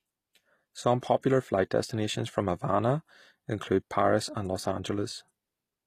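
Throughout the speech, the treble sounds synthetic: sibilants turn gritty and metallic. The likely cause is HE-AAC compression at a low rate, around 24 kbps, rebuilding the upper band from copied lower bands. On a spectrogram the treble shows blocky, repeated harmonic patterns above a crossover.

At 1.21 to 1.23 s, pre-echo appears. A brief hiss, about 21 ms long, precedes a sharp onset, because quantisation noise spread across the codec block fills the quiet gap before the attack. The waveform shows low-level noise ahead of the transient.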